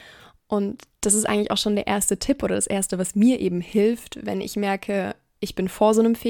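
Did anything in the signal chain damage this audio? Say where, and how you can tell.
No, none of the stages in the chain has left an audible mark on this speech recording.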